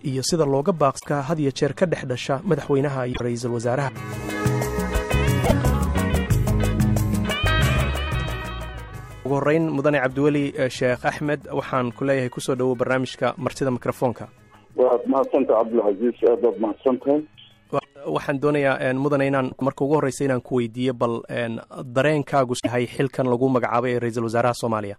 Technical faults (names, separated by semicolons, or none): damaged data in a compressed stream